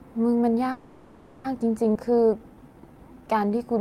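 From 0.71 s to 1.46 s the speech stops and the last sound carries on as a fading buzz or hiss, filling about 730 ms without ever going silent. This is a call audio freeze, likely from packets held up until the jitter buffer ran dry. Speech then resumes where it stopped, with nothing lost and 730 ms of extra delay.

At 1.94 to 1.97 s there is a skip ahead. Roughly 300 ms of speech is dropped, bridged by about 10 ms of fill, so the two sides join almost directly. The discarded audio cancels much of the delay built up earlier.

From 2.06 s to 3.77 s a jitter buffer slow-down sets in. The receiver repeats single pitch periods and bits of pauses to rebuild its reserve, adding 212 ms. Speech runs at 88% speed with unchanged pitch, with stretched sounds.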